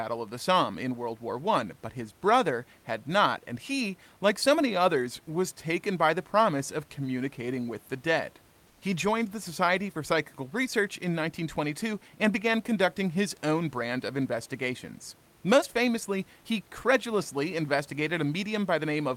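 Comfort noise in place of the background appears from 8.67 to 8.79 s, a gap of about 120 ms in which the room noise, otherwise sitting about 35 dB below the speech, gives way to a smooth, featureless hiss roughly 2 dB quieter. The likely cause is discontinuous transmission, as in Opus DTX: the sender's voice detector judged the pause silent and stopped sending, so the receiver substituted synthetic noise shaped only loosely like the real background.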